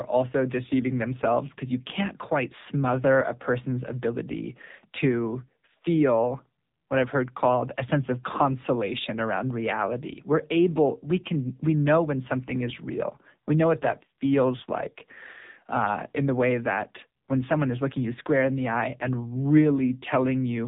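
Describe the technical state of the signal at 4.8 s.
At 4.8 s the speech carries the AMR narrowband mobile codec damage heard throughout. Nothing passes above about 3.8 kHz. Few pulses drive a vocal-tract model in each short frame, so the voice sounds buzzy and synthetic, which fits a low rate near 6.7 kbps.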